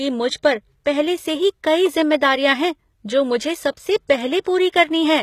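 From start to finish the speech carries plainly audible coding damage, and the sound is likely from HE-AAC compression at a low bitrate, something around 20 kbps. The lower band is coded properly, while the treble is rebuilt by copying lower bands upward under a coarse envelope, so the top stays bright but isn't the real thing. S sounds come out gritty and metallic, and nothing at all reaches above about 14.9 kHz.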